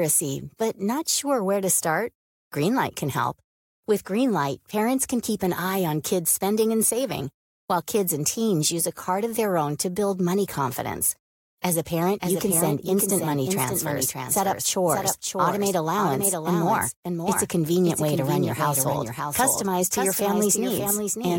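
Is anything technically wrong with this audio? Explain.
Yes. From 12.22 s to the end, the speech has a doubled audio track: a second full-band copy trails about half a second behind, around 5 dB quieter, with no reverberant tail. It starts abruptly, likely from a second, slower capture path mixed in.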